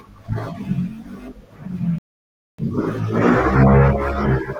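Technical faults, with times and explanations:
1.98–2.59 s, rebuffering stall: the player drained its store of downloaded audio and had nothing left to play, so it halted until the next data arrived. In the speech this is heard as an abrupt drop into silence lasting about 0.6 s, after which the sound picks up at exactly the point where it broke off. No speech goes missing; the gap simply inserts about 600 ms of dead air into the timeline.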